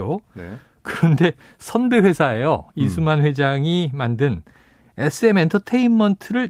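No technical faults can be heard anywhere in this recording.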